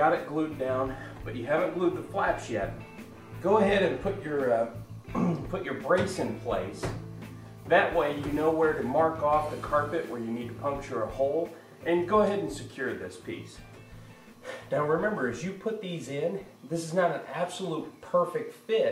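Nothing stood out as a technical problem on listening to this audio.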